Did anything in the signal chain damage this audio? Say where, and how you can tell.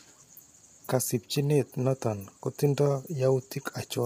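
Yes. Low-delay AAC compression runs through the whole speech clip, from start to finish, at the codec stage. The voice sounds rough and grainy throughout, with noise filling the gaps between harmonics and a thin, artificial-sounding top band. The damage is heavy, which fits a bitrate around 24 kbps. The likely cause is AAC-ELD, whose short frames resolve pitch harmonics poorly. At that rate there aren't enough bits left to code the spectrum cleanly.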